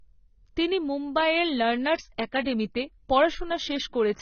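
From start to end the speech is band-limited, with nothing above about 6.6 kHz, and sounds dull and smeared, with a warbling, fizzy edge on sibilants. This is likely heavy AAC compression, with AAC-LC quantising coarsely at a rate that fits roughly 16 kbps.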